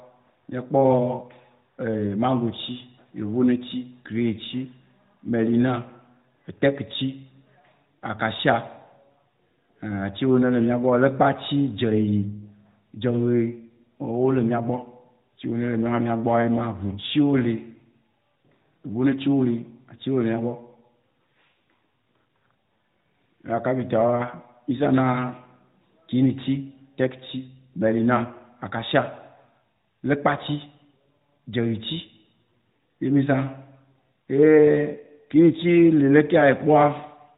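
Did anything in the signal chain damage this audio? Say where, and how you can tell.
No, nothing in the signal chain damaged this audio.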